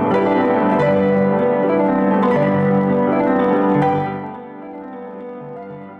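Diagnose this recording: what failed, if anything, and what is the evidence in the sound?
The buffer-stage gain stepped down in unsmoothed 1 dB jumps, about thirty a second, causing zipper noise from 3.88 to 4.44 s as level fell roughly 15 dB.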